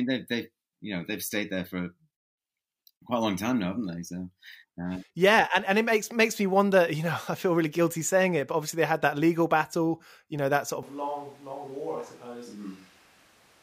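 At 10.83 s the speech suddenly turns roomy and hollow, and it stays that way to the end. The bass thins out. The level drops by roughly 10 dB. Room noise rises, sitting only about 25 dB below the speech. This is a switch to a distant microphone. The close microphone's signal was likely lost, so the recording falls back on one farther away, which picks up more room and less voice.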